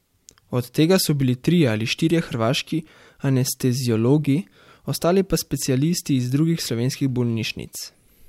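No audible technical faults anywhere in the speech.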